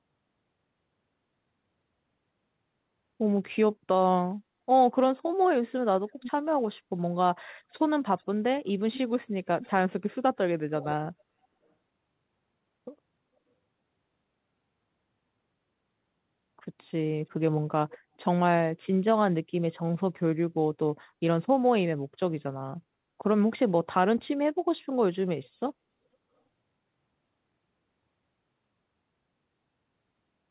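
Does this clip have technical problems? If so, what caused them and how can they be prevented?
Yes, the clip has an echo leak. Residual loudspeaker pickup likely slipped past an echo canceller on the far end and was sent back, so a faint delayed copy of the speech, roughly 15 to 25 dB below it and trailing by about 0.42 to 0.44 s, surfaces in short scraps at 6.07–6.31 s, 8.14–8.25 s, 9.61–9.71 s and 10.8–10.87 s, heard through the G.711 call path that cuts everything above 4 kHz. Using a headset on the loudspeaker side, or letting the echo canceller converge properly with a stable delay estimate, would prevent it.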